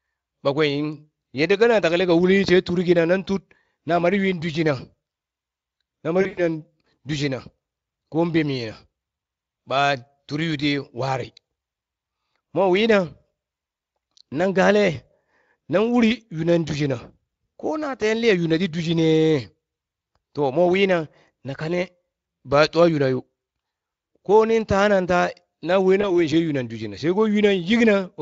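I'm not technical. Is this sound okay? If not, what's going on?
No. Twice, pieces of the call's data never arrived. This is VoIP packet loss concealed by the speech codec. The decoder guessed the missing bits by stretching the last sound, so at 6.21 to 6.42 s speech sounds stretched and fades, and briefly again at 26.01 s, just after "na we".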